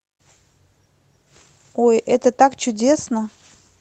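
Nothing goes wrong anywhere in this speech, which comes through the call link with just the ordinary character you'd expect from a voice codec at that kind of bandwidth.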